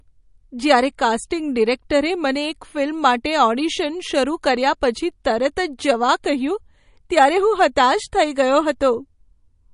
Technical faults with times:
0.00-9.74 MP3 compression

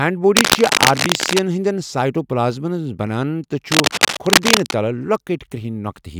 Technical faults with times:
0.36-1.41 cable scratch noise
3.71-4.74 cable scratch noise

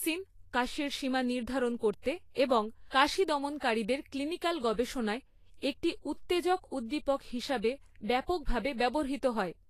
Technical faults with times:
0.00-9.69 Vorbis compression

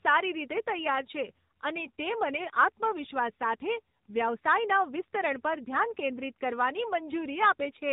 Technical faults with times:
0.00-7.92 AMR narrowband mobile codec

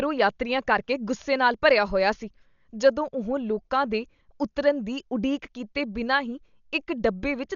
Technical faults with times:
0.00-7.55 Dolby Digital compression

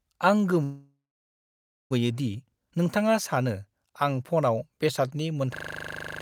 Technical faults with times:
0.63-1.92 call audio freeze
5.55-6.22 system hang loop

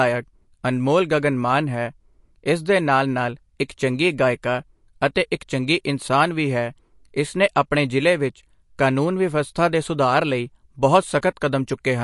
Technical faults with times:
0.00-12.03 MP3 compression
3.68 pre-echo
5.14 pre-echo
11.21 pre-echo

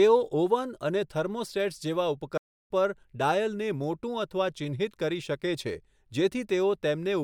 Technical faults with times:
2.37-2.70 playback stall

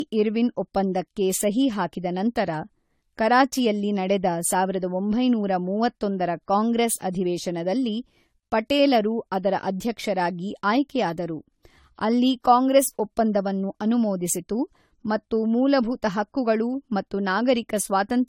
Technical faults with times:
0.00-18.28 generation loss

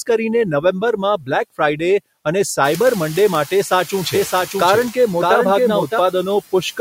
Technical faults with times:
0.00-6.81 noise suppressor artifacts

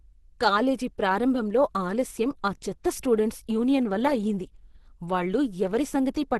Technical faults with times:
0.00-6.39 Opus compression

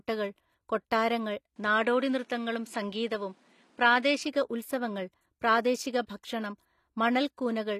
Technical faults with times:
0.00-7.79 HE-AAC compression
1.56-4.24 input switched to a poorer device

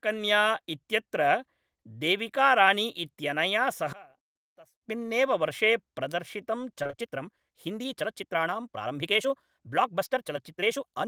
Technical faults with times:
3.93-4.83 one channel inverted
6.68-11.08 time-stretched section
6.83-6.95 short concealed packet loss

